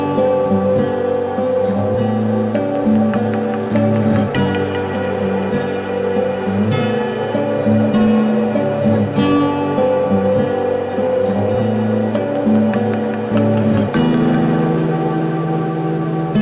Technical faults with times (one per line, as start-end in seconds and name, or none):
none